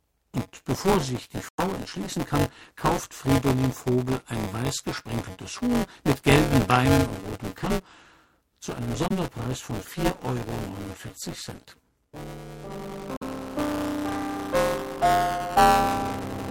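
From start to finish the audio carries a buzzing, rattling texture at 188 Hz, which fits a 256-sample buffer. This is buffer tearing: the writer and reader of the playback ring buffer have drifted out of step and cross within every period, so roughly a fifth of each buffer repeats audio from around 15 ms earlier, with hard joins at both ends. The rattle is present only where there is signal.

Three short holes cut the output to silence, at 1.49 to 1.60 s, 9.08 to 9.12 s and 13.17 to 13.23 s. They last about 0.11 s, 0.04 s and 0.07 s. Each one is likely a Bluetooth dropout, where packets reached the headphones too late and were discarded. After each gap the sound picks up further along, as though it had kept playing through the silence.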